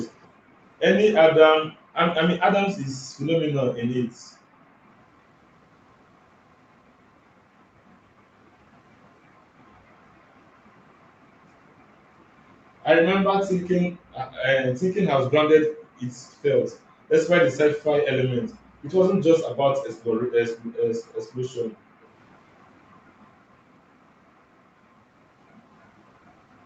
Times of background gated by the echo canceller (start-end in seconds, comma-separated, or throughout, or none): 4.17-4.79, 13.98-14.13, 15.72-17.09